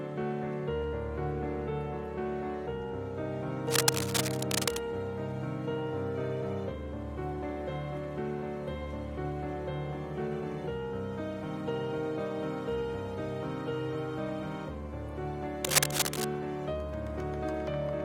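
A worn cable or connector being moved is the likely cause here: its contact resistance jumps around rapidly, injecting dense, irregular bursts of noise into the signal. This cable scratch noise appears from 3.67 to 4.78 s as a rough scratching, roughly as loud as the sound itself, and again from 15.64 to 16.24 s, where the rustling is a little louder than the sound and briefly dominates it.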